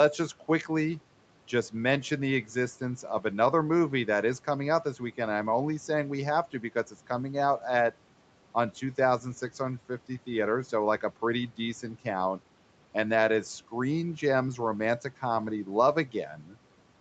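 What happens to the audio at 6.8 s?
The noise suppressor mistook part of the speech for background noise between 6.52 and 7.08 s, just after "only saying we have" and before "out at on". It pulled that speech down by as much as about 11 dB, for roughly a tenth of a second in total, so the sound there comes across swallowed and faint.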